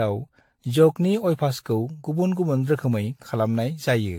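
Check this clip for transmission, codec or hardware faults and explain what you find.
There's one fault, and it runs through the whole clip: generation loss. The speech sounds swirly and hollow, consonant attacks are smeared, and nothing comes through above 18.6 kHz. That's a lot more damage than one pass at a decent bitrate would do. The likely cause is the audio being decoded and re-encoded around ten times with an AAC-type codec, which fits something like 96 kbit/s. Each pass re-quantises on a shifted frame grid, so the noise and spectral gaps keep piling up.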